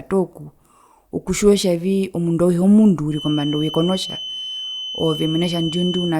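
A feedback whistle enters at 3.07 s and continues to the end at 6.2 s: a thin, steady 3 kHz tone sitting about 10 dB below the speech, swelling and fading slowly in level. It likely comes from a loudspeaker-to-microphone loop held just short of runaway feedback.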